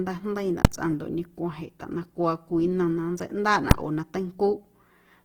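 Across the whole speech clip the sound is rough and grainy, with a plainly audible noisy fuzz, the likely result of Opus compression in its music (CELT) mode at a low bitrate, something near 16 kbps. The full band is kept, but bands starved of bits are filled with folded copies or noise. On a spectrogram the upper region stays populated yet looks smeared and speckled, not holed like MP3.

At 0.65 s and again at 3.71 s there is a single sharp bang, caused by invalid numbers at full scale. A calculation produced infinite or invalid values that were pinned to the largest positive or negative value for one short block, about 2.67 ms, which fits a 128-sample processing block. The waveform shows a flat slab held at one extreme, far beyond the speech peaks, at each time. The spectrogram shows a thin vertical stripe spanning every frequency.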